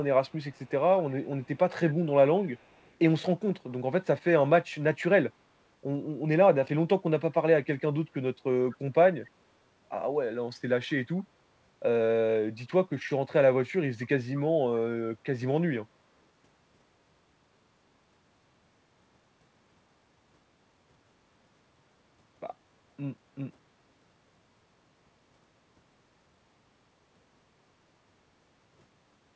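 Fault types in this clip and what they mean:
Echo leak: one side of the call likely plays the audio over a loudspeaker, and its echo canceller failed to remove all of what its microphone picked up, so part of it was sent back. A faint copy of the speech trails the original by about 240 ms, roughly 30 dB below it, in scraps at 0.27–0.71, 1.01–1.58, 1.91–2.12 and 8.71–8.77 s, and about 35 dB down at 2.37–2.96 s.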